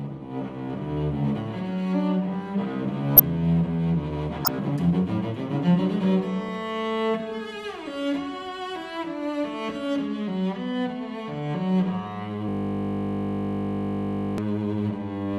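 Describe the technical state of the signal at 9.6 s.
Nothing at 9.6 s shows a fault: the signal is intact at that point.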